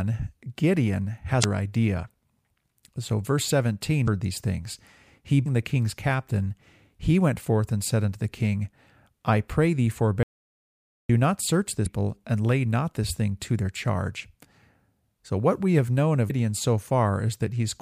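Damaged data in the compressed stream at 1.40–1.44 s, 4.04–4.08 s (just before "these things he") and 5.42–5.46 s (between "these things he" and "the king's captain he"): corrupted frames throw the decoder out of sync, leaving brief glitches of about 40 ms before it locks onto the next valid frame.

An audio dropout to silence follows at 10.23–11.09 s. The speech cuts to silence for about 0.86 s, with no room tone, most likely because the input signal was lost while the recorder kept writing silence.

The same stream damage returns at 11.82–11.87 s (between "not search" and "and lay not this") and at 16.26–16.31 s, each a short glitch as the decoder skips ahead.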